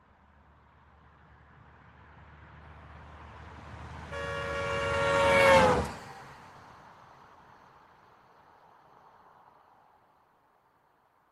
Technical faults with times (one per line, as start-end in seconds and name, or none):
none